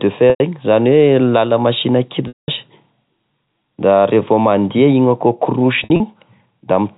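Packet loss with pitch repetition, three times: at 0.30–0.40 s and 2.28–2.48 s, 100 ms and 200 ms of audio were lost and the receiver looped the last pitch period, giving a held, buzzy tone that fades out. At 5.84–6.00 s, 100 ms went missing in scattered bursts (longest 60 ms), heard as brief stuttering buzzes over the band-limited G.711 telephone sound.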